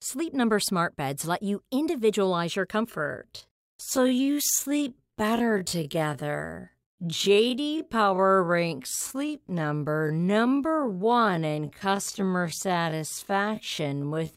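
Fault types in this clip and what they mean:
Time-stretched section: from 2.87 s to the end, the speech abruptly slows to 0.57 times its normal pace while the pitch holds steady, so it drags. The likely cause is software lengthening the audio by repeating short pieces to fill time.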